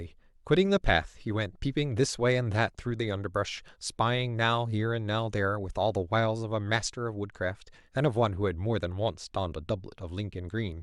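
No technical faults are audible anywhere in the speech recording.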